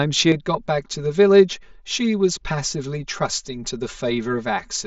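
From 0.32 s to the end, one channel runs roughly 5 ms behind the other, and the two are summed to mono. This channel delay causes comb filtering: energy common to both channels cancels at evenly spaced frequencies, with the first notch near 100 Hz and further ones at regular intervals above it. The speech turns hollow and phasey, with a fixed coloration across the mSBC headset band, which stops near 7.7 kHz.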